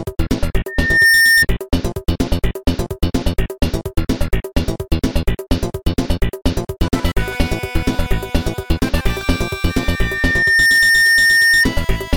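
Loudspeaker feedback squeal rises at 0.68 to 1.46 s and again at 9.69 to 11.67 s: a microphone-to-speaker loop exceeds unity gain at 1.8 kHz, so one pure tone swells, within half a second at first and over about a second later, to a few dB above the signal. A spectrogram shows a brightening horizontal line at 1.8 kHz, and the waveform envelope bulges steadily.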